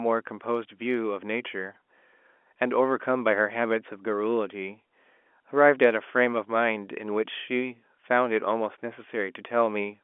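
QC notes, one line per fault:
No faults found in this telephone-band speech recording.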